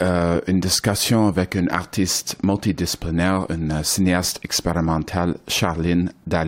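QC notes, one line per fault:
No faults found in this speech recording. Nothing here needs a QC note.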